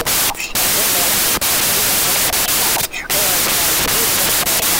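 From start to end, the clip suffers a wrong sample width. Audio written as 16-bit integers is read as packed 24-bit integers. Each value is built from three bytes instead of two, so most values mix bytes from neighbouring samples. Only some keep the real signal's top bits. The result is loud, harsh noise with the speech buried underneath. Fewer samples come out of the same data, so the speech runs 1.5 times too fast, with pitch raised by the same ratio.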